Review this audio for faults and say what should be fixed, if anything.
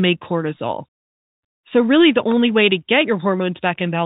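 No faults heard, so nothing needs fixing.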